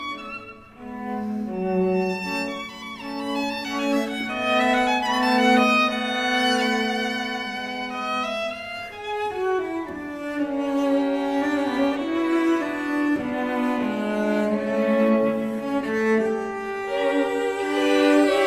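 No technical faults are audible.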